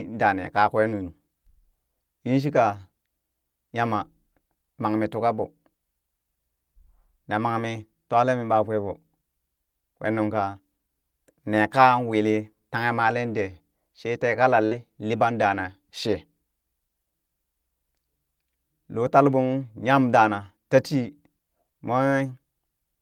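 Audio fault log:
14.65–14.74 s, burst of packet loss: between "dee shee tee" and "liɓan dana shee", about 56 ms of concealment stretches the last sound into a fading held buzz, then about 60 ms of speech is skipped. Spectrogram shows frozen, dimming bands; the waveform shows a decaying repeated segment.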